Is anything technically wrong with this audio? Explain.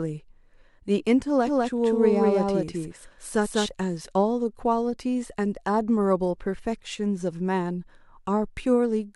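Yes. From 1.47 to 3.69 s there's a doubled audio track: a full-band copy of the speech trailing roughly a fifth of a second behind, about as loud, with no room colour, cutting in and out abruptly. Likely a second, slower capture path mixed in.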